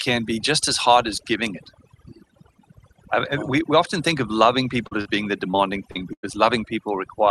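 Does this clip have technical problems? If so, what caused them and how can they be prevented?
Yes. Throughout the clip the background drops and breaks up into twinkling specks. This is overdone noise removal: a suppressor set too strong switched off individual frequency bands near its noise estimate, taking quiet parts of the voice with them. Setting the reduction to a gentler level would prevent it.

Brief smears and wobbles occur at 4.87 s (just after "often think of loving"), 5.01 s (just before "being the"), 5.51 s (just after "being the") and 5.91 s. Each lasts roughly 20 to 40 ms. These are short concealed packet loss: audio failed to reach the decoder in time, so the receiver extended the preceding sound and blended back into the real signal. A larger jitter buffer or forward error correction would prevent them.

From 6.13 to 6.25 s the sound turns into a held, fading tail, then resumes further on with about 100 ms missing. 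This is a burst of packet loss, in which several consecutive packets were lost and concealment stretched the last sound while turning it down. Redundancy or a more stable network route would prevent it.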